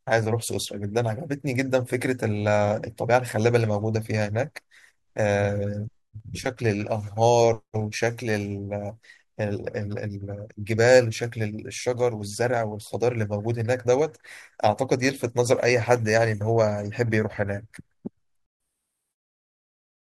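No technical faults are audible.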